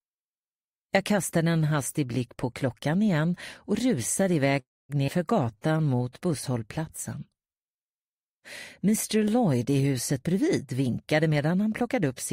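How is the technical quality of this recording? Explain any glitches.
The recording has four transport glitches, all packed into two spots, and each one changes the timing of the playback.

From 4.59 to 4.91 s there's a call audio freeze. The last bit of sound hangs as a short fading buzz, then about 240 ms of silence. In all, roughly 296 ms gets inserted before the sound resumes where it left off. The likely cause is packets arriving late and the jitter buffer running dry.

Right after that, at 5.07 to 5.10 s, there's a skip ahead. Playback jumps past around 150 ms of sound, and the two sides are butted together with almost no gap. A chunk was dropped while later audio was already queued.

From 5.44 to 6.53 s there's a jitter buffer slow-down. The receiver repeated pitch periods to rebuild its reserve, padding in 127 ms. The sound plays at about 89% speed with unchanged pitch, so it feels stretched.

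From 10.12 to 12.32 s there's a jitter buffer speed-up, the opposite fix. The buffer had too much queued, so it trimmed tiny pitch-period slices, roughly 200 ms in total. The sound runs at about 108% speed with the same pitch and comes across hurried.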